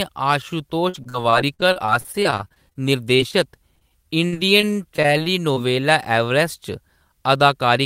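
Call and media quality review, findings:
Repeated packet loss (robotic sound), 0.89–5.58 s: choppy, robotic speech. Network jitter buffer concealing about 30 gaps by extending prior audio, longest 57 ms, roughly 14% of span.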